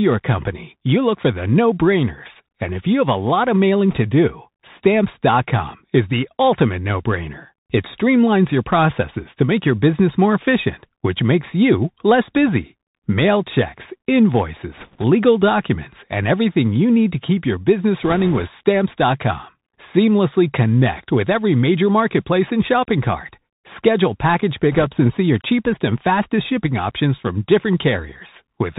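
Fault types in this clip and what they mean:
Bluetooth CVSD headset codec: the speech was carried over a narrowband CVSD headset link, coding one up-or-down bit per sample at 64 kbps, so nothing above 4 kHz survives; loud high sounds outrun the adapting step and distort, s sounds turn scratchy, and granular hiss sits underneath throughout.
Bit errors on a Bluetooth voice link: flipped bits on the CVSD link add bursts of rushing, crackly noise rather than loud clicks, at 3.91 s after "lot of mailing", 14.78 to 15.04 s before "documents and everything you", 18.03 to 18.46 s, and 24.72 to 24.88 s before "and see your cheapest".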